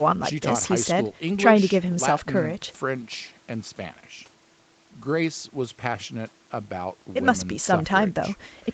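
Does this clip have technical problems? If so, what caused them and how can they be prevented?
No, this speech clip has no technical problems to fix. Nothing is heard above about 8 kHz, the normal limit of the call microphone processing and the WebRTC call path, which fits a wideband Opus setting.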